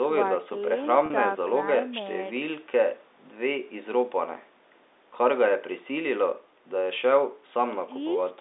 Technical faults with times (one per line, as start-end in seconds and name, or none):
1.06-1.10 packet loss with pitch repetition